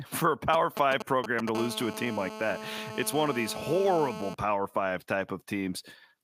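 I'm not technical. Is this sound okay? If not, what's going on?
No, it isn't. From 0.53 to 1.49 s, just after "for a", there are GSM signalling bursts: a galloping pattern of ticks and short buzzes. A 2G mobile phone nearby was briefly signalling, and the audio equipment picked up its radio pulses.

Then, from 1.55 to 4.35 s, ending just before "power five", a steady GSM phone buzz runs under the speech. It is a harsh, raspy tone repeating about 217 times a second, because that nearby phone was now on a call.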